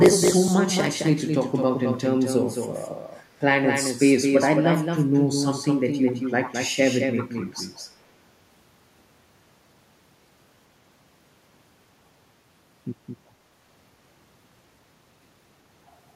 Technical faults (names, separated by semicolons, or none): doubled audio track; echo leak